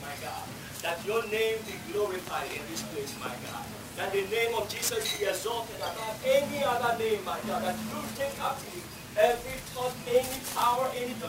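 Throughout, a grainy hiss rides on the loudest, brightest moments and fades in quiet: sample clock jitter, the converter's timing wandering by roughly 10 microseconds.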